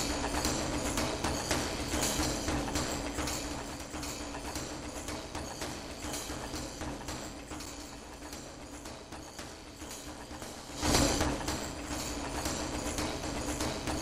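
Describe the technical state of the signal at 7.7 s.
At 7.66 s there is a block of digital silence, about 8 ms of silence in place of the audio, most likely because the output buffer was not filled in time. The sound cuts off and resumes without any fade, and a gap this short is heard as a tick or dip rather than as silence. A lossy dropout or concealment glitch would leave a smeared or filled gap, and this one drops to plain silence.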